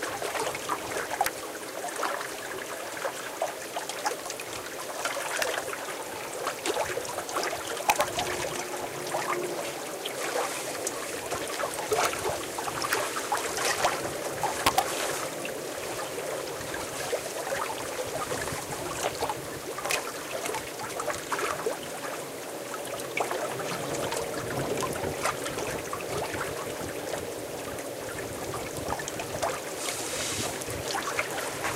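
Violent, sharp cracks hit the loudest moments at 1.26 s, 5.42 s, 7.90 to 8.01 s, 11.93 to 12.05 s, 12.93 s, 13.85 s, 14.67 to 14.79 s and 19.91 to 19.95 s, harshest at 1.26 s and 19.91 s. This is integer overflow. Peaks driven up to about 8 dB past the integer ceiling wrapped to the opposite extreme instead of being limited.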